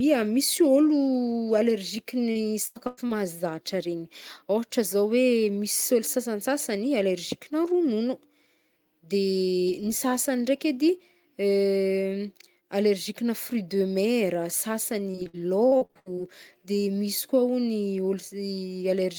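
From 2.31 to 3.11 s, repeated packet loss (robotic sound) chops the speech. Short holes are patched by stretching the last sound, so it turns choppy with pieces missing. It returns from 15.11 to 16.19 s with denser gaps, each up to 64 ms.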